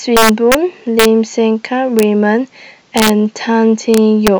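The speech breaks up with integer overflow at 0.17 to 0.55 s, 1.00 to 1.05 s, 1.99 to 2.03 s, 2.98 to 3.09 s and 3.94 to 4.28 s. Somewhere in the chain a sum or gain isn't being limited, so peaks that go past the top of the integer range wrap round to the opposite sign and jump across the whole range. They only overshoot by about 2 dB at most, about 1 dB in most places, and sit right at the limit around 2 s. Each one still comes out as a harsh, violent crack, much sharper than ordinary clipping.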